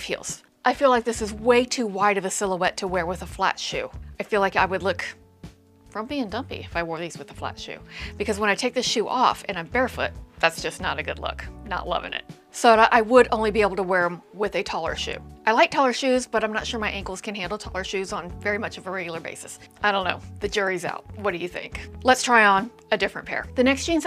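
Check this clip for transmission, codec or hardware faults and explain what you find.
Nothing here points to a transmission, codec or hardware fault; the signal path holds steady throughout.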